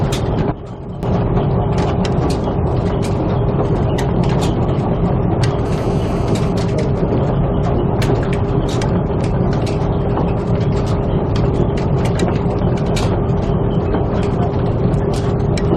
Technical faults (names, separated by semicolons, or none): sudden gain jump; GSM phone buzz; GSM signalling bursts